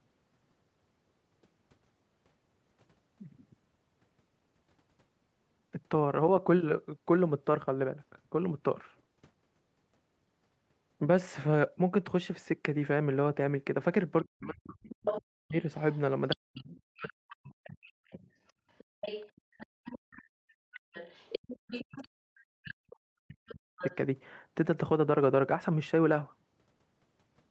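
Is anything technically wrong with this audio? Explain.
Yes. There is speech suppressed in double talk at 14.24–15.55, 16.35–18.21 and 21.62–23.85 s. The voice drops by roughly 40 dB or cuts out in pieces, likely because the echo canceller mistook overlapping talk for echo. Unlike a network dropout, it happens only while a second voice is present.

The other side's voice leaks through at 14.9–15.22, 15.92–17.36, 18.08–22.06, 22.69–22.74 and 23.32–23.96 s. That second voice sits roughly 5 to 20 dB below the main speech, likely loudspeaker echo left in by the canceller.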